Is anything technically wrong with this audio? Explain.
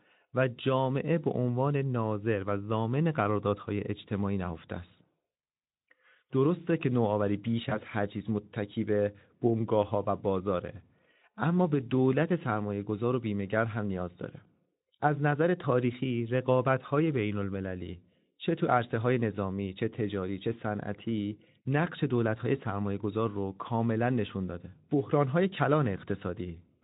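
Yes, there's one glitch, a case of VoIP packet loss concealed by the speech codec, from about 7.69 to 7.82 s. Roughly 20 ms of audio went missing, which fits a single dropped frame. The decoder (it sounds like Speex at around 15 kbps) filled the hole by stretching the last pitch and filter forward at falling gain. You hear a short buzzy or noisy smear, and because each frame leans on the previous one, the voice stays weak and off for tens of milliseconds afterwards before recovering.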